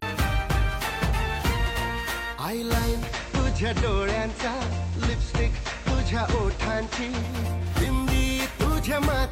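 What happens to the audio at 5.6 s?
At 5.6 s the radio is in the middle of a digital radio blend to analogue FM, lasting from 2.90 s to 7.45 s. A 0.25 s cross-fade moved it onto the FM broadcast. Hiss sits roughly 25 dB down. The level drops about 1 dB.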